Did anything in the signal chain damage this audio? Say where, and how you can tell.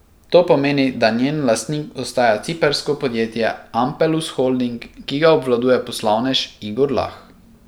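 No, nothing along the chain has left an audible mark on this speech recording: the signal holds steady and continuous throughout, with no stage of capture, conversion, transmission or playback giving itself away.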